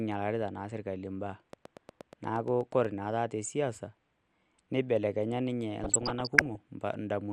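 The whole clip sounds dull and gurgly, with upper bands dropping out. That's likely MP2 compression starved of bits, which fits something around 80 kbps. From 1.53 to 2.86 s, about ten evenly spaced clicks tick along at roughly 8.4 per second, peaking about 5 dB above the speech. It's a train of clicks, likely from interference. Then, from 5.84 to 6.6 s, DAB burbling kicks in, with bubbly squelches as bit errors of around one percent throw individual sub-bands' levels around.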